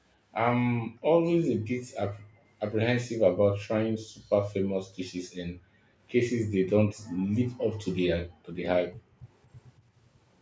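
An echo leak appears from 2.31 to 2.48 s in this speech recording: a very faint delayed copy of the talker, roughly 35 dB below the direct voice and trailing it by about 232 ms. The likely cause is a far-end echo canceller that left a scrap of loudspeaker sound in its microphone signal, which then travelled back down the call. Background gated by the echo canceller occurs at 5.45 to 5.98 s, 7.19 to 7.24 s, 8.27 to 8.45 s and 8.92 to 9.20 s. In each, the room sound ducks and then returns. The drops reach about 40 dB in the first, third and fourth cases and about 24 dB in the brief second one. This happens because the canceller clamped down on the microphone while the loudspeaker was active, silencing the ambience until it released. The audio has the call path's normal band-limiting, with nothing above 8 kHz.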